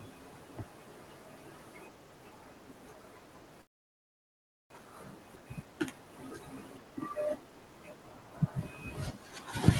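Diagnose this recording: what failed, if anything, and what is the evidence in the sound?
Network stage: from 3.61 s to 4.76 s the sound stops. What remains is a brief fading continuation of the last sound, then near-silence for about 1.1 s. The likely cause is a long network dropout, in which packets stopped arriving and the receiver's concealment ran out. About 600 ms of the original audio is missing outright. On a waveform this is a flat stretch. A spectrogram shows a short smeared tail, then an empty band up to the 12 kHz ceiling of the Opus path.

Buffer stage: from 4.78 s to 8.10 s the audio runs hurried, about 115% of normal speed with unchanged pitch. This is a jitter buffer speed-up. After the outage, delayed audio arrived in a burst, so the buffer held roughly half a second more than its target. The receiver drained it by repeatedly cutting out pitch-period-length slices. A spectrogram shows the same harmonic spacing with segments compressed in time. 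The waveform shows cycles spliced together at frequent points.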